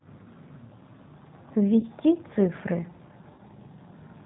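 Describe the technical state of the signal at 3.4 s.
At 3.4 s the signal sits inside a burst of VoIP packet loss concealed by the speech codec, running from 3.34 to 3.41 s. About 40 ms of audio, which fits two lost 20 ms packets, is replaced by the decoder extrapolating its last pitch and filter with falling gain. The result is a brief buzzy tone or coloured noise that fades, and the sound stays weak for a short time after real data resumes.

Underneath this is the G.729 codec, audible across the whole clip at 8 kbit/s. It resynthesises speech from a vocal tract filter, a pitch predictor and sparse pulses, cutting everything above 4 kHz and giving the speech a plainly rough, slightly synthetic texture.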